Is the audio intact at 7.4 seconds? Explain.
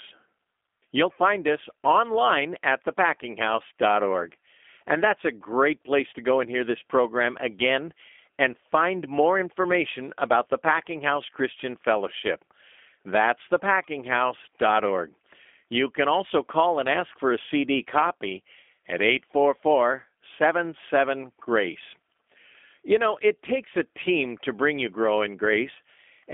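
No. At 7.4 s the speech carries G.729 codec damage, which runs through the whole clip. The codec rebuilds each 10 ms frame from a vocal tract filter, a pitch predictor and a few pulses, so the result sounds plainly rough and slightly synthetic. The band is confined to roughly 250 Hz to 3.5 kHz, with nothing above 3.6 kHz, giving a thin telephone-line quality that fits an 8 kbit/s stream.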